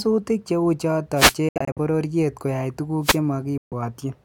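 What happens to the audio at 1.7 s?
At 1.7 s the speech is inside a Bluetooth dropout from 1.49 to 1.78 s: short silent gaps totalling about 160 ms, the longest 70 ms, likely from late packets being discarded. The spectrogram shows sharp-edged blank columns, and speech resumes as if it had played on.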